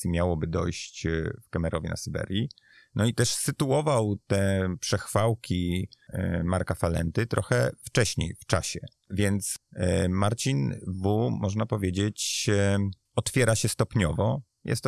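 Aliasing runs through the whole speech clip. Content above 12 kHz has folded back to unrelated frequencies, which fits a drop from 48 kHz to 24 kHz without filtering first. It sits roughly 30 dB down, leaving sibilants gritty and metallic.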